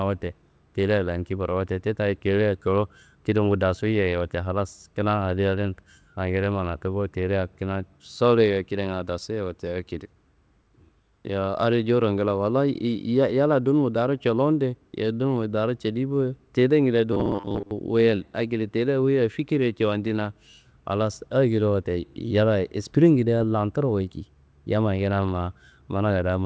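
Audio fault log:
17.13–17.71 s, robotic sound from repeated short buffers: For a bit over half a second the speech hardens into a rigid, metallic buzz pitched at 100 Hz, still loosely tracking the phrasing. The likely cause is fresh audio arriving too seldom, so the playback keeps re-sending the last 10 ms chunk, and most of this stretch is repeated material rather than real audio. That 10 ms repeat period is what imposes the fixed 100 Hz tone.
23.38–23.42 s, short concealed packet loss: A brief smear or wobble lasting about 20 ms interrupts the speech. That much audio never reached the decoder in time, so the receiver invented a 20 ms fill by extending the preceding sound, carrying on its pitch or its noisy texture, then crossfaded back into the real signal.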